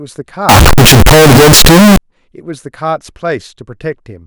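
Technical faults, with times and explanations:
0.49 to 1.97 s, float read as integer: the speech suddenly turns into a near-square, very loud, harsh blast at an almost fixed, high level, with background noise as loud as the talking. It's likely 32-bit float samples being read as 32-bit integers, so sign and exponent bits dominate, though pitch still comes through.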